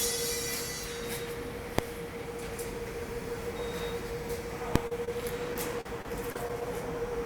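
At 1.79 s and again at 4.76 s a single sharp bang cuts through the sound. This is invalid numbers at full scale: a calculation went infinite or undefined and was pinned to maximum output for under 2 ms, which fits a 32-sample and then a 64-sample block.

Between 4.87 and 4.92 s, and again between 5.05 and 5.08 s, the audio briefly smears and wobbles. These are short concealed packet losses. Roughly 40 ms and then 20 ms of audio arrived too late, and the receiver bridged each hole by extending the preceding sound before blending back into the real audio.

From 5.54 to 6.62 s the sound turns choppy as repeated packet loss (robotic sound) sets in. Six separate holes, the longest 40 ms, were each patched by continuing the last sound. About 11 percent of that stretch is filled-in audio rather than the real signal.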